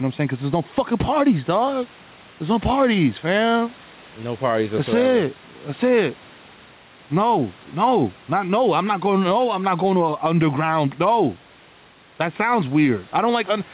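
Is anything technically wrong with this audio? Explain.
Yes. Gain pumping runs through the whole clip. The gain moves by roughly 5 dB. The likely cause is microphone gain set far too high, with a fast limiter or compressor pulling the level down on each loud sound and releasing it in the pauses. Loud and quiet parts sit close together, and the speech sounds squashed. The narrow call-codec bandwidth, with nothing above 4 kHz, is normal for this path.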